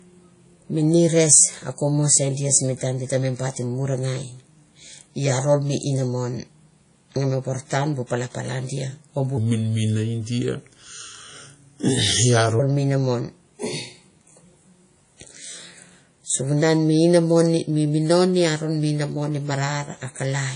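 Throughout the speech, a plainly audible ringing, washy wash with breathing hiss and nothing above 10.1 kHz points to likely WMA compression at a low bitrate, around 32 kbps. From 9.37 to 12.60 s, between "dia o bu" and "mi inamon", the voice turns deep and slow, about four semitones lower at 0.8 times speed, likely a section at the wrong speed.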